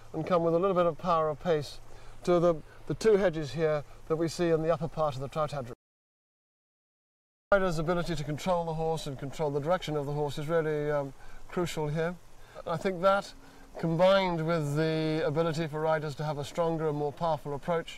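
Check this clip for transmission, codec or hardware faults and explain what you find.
There's one fault: an audio dropout to silence from 5.73 to 7.52 s, about 1.79 s long. The sound cuts off mid-flow into dead silence, no room tone at all, then resumes abruptly. That's likely the input being lost, from a disconnect or mute, while recording carried on writing silence.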